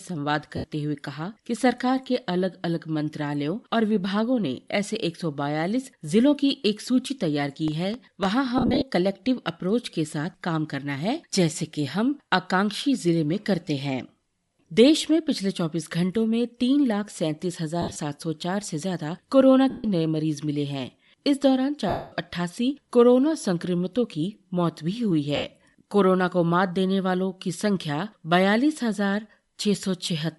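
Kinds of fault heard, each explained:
Bluetooth LC3 compression: A plainly audible breathy, grainy edge runs through all of the speech, with the upper band thinned and replaced by noisy fill, likely from LC3 coding at around 48 kbps. Unlike the dropouts, it never comes and goes.
Lost LE Audio frames: Six short stretches, from 0.57 s to 25.36–25.44 s and lasting 70 to 230 ms, where missing frames were patched by repeating the last spectrum with scrambled signs. The result is a noisy smear, not sharp clicks.
Processor overload crackle: From 7.68 to 8.25 s, audio buffers missed their deadline and were filled with stale audio. The tiny pieces, fitting buffers under a millisecond, have hard edges and sound like gritty crackle riding on the speech, quite unlike the smoother smear of lost frames.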